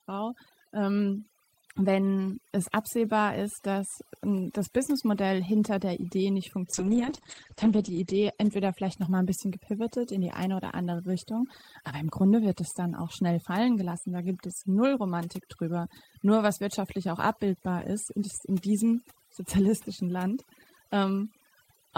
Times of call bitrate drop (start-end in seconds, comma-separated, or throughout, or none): 6.74-9.57